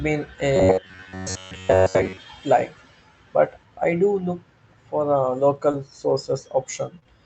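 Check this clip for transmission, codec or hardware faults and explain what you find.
Two faults are audible, both consistent with a WebRTC call path; the Opus coding keeps the band at about 8 kHz.

From 0.56 s to 2.17 s, just before "like but", the sound has robotic sound from repeated short buffers. A rigid metallic buzz at 93.8 Hz runs through most of this stretch. The cause is likely late-arriving audio: the playout side loops a short fragment instead of the skipped real audio. A 93.8 Hz buzz implies a repeat period of about 10.7 ms.

From 5.55 s to 7.07 s, after "do look for a", there are scattered short gaps: a few isolated dropouts, the longest around 30 ms. In total 60 ms of audio is missing and 140 ms is rebuilt by extending the preceding sound. The concealed portion is only a small share of the span, so the speech remains clear, with brief hiccups and smears where each hole was patched.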